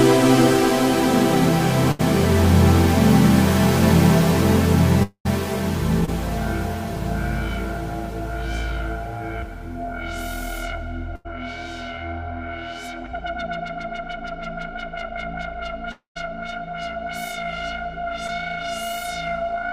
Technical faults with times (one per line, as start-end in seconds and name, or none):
1.91-2.01 burst of packet loss
5.03-5.27 long network dropout
6.05-6.09 short concealed packet loss
11.15-11.27 burst of packet loss
15.91-16.17 long network dropout
18.27-18.30 short concealed packet loss